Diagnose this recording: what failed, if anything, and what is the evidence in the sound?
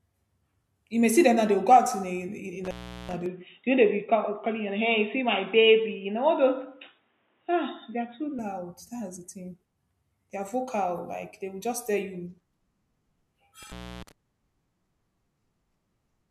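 Intermittent contact in the analogue wiring: at 2.64 s and 13.63 s the speech cuts out for 0.38 s and 0.31 s, with crackling edges that a clean digital dropout lacks.

From 3.26 to 8.39 s the speech turns boxy, with nothing above 3.8 kHz and a faint new noise floor. The level is unchanged and there is no gap. This is likely an input switched to a poorer device, since the noise change rules out a plain codec low-pass.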